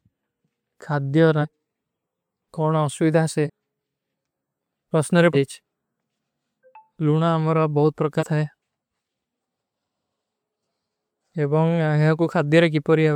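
At 1.41 s, 3.46 s, 5.33 s and 8.19 s the speech jumps forward: compressed frames skipped, where whole coded frames were lost or rejected by the decoder. The skips are roughly half a second, about 0.3 s, about 0.4 s and about 0.15 s, which fits runs of several 42.7 ms frames.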